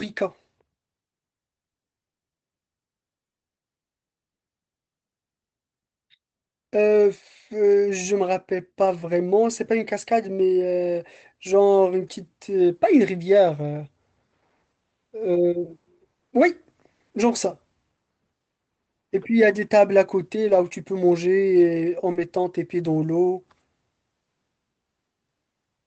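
Short rough, grainy patches with no gap in the sound occur at 8.85 s, 10.39–10.41 s, 12.03–12.13 s and 20.47–20.61 s, lasting about 20, 20, 60 and 80 ms. Each is a lost packet rebuilt from error correction: the decoder played the low-bitrate backup copies carried in the following packets, which are coarser and noisier than the originals.

At 22.11–22.17 s a brief smear appears. This is a short concealed packet loss: 40 ms never arrived in time, so the receiver extended the preceding sound to fill the hole before blending back. It runs straight into another error-correction rebuild at 22.15–22.25 s, about 60 ms of the same roughened texture. All of this plays over the Opus call path at 24 kbps, whose audio band stops at 8 kHz.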